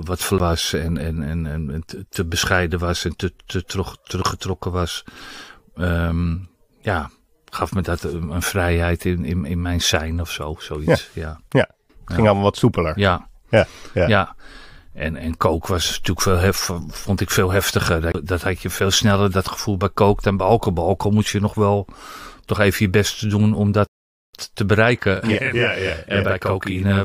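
At 0.38 s, just before "en en en en", and again at 18.12–18.15 s, between "vond ik veel heftiger" and "dat had je veel", a CD skip ticks and mutes for a few tens of milliseconds. The laser has jumped tracks, so playback resumes from a different spot. From 23.87 to 24.34 s a rebuffering stall drops to silence for 0.46 s while data runs out. Unlike the skips, it resumes exactly where it stopped, adding time without losing any. From 25.17 s to the end, after "te bereiken", a channel delay (doubling) sums a copy 40 ms late at equal level. This gives a doubled sound rather than a spreading reverb tail.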